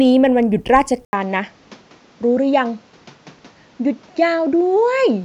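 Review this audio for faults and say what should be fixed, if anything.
At 1.05 s an 80 ms gap precedes duller speech with nothing above 7.6 kHz and a noise floor about 30 dB down, with no level change. This points to a likely input switched to a poorer device. Locking the recording input to the intended microphone and disabling automatic device switching would prevent this.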